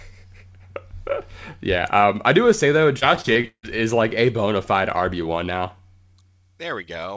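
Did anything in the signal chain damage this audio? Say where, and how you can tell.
Yes. At the network stage, repeated packet loss (robotic sound) runs from 3.00 to 3.65 s, between "want to say though" and "is like a bona". Seven gaps, the longest 152 ms, leave the speech choppy and robotic. Lost packets were patched by extending prior audio, concealing 42% of the stretch.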